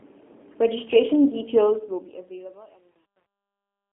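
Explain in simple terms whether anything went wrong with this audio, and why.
Two things went wrong. The whole clip went through the G.729 codec, a phone-call squeezer that cuts everything above about 3.6 kHz, so the speech sounds thin, rough and a bit synthetic.

There's also truncation distortion on a fade. From 1.6 s the quiet tail of the fade turns gritty, and it is worst from 2.27 s to the end, which fits a volume stage keeping only about 10 bits.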